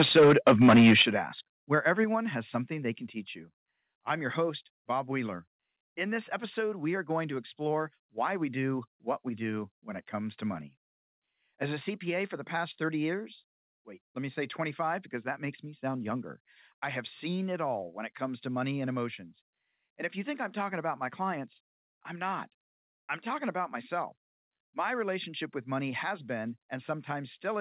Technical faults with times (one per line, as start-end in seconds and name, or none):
0.00-1.02 microphone overload
1.02 microphone volume stepped down
2.04 microphone volume stepped down
13.14 microphone volume stepped down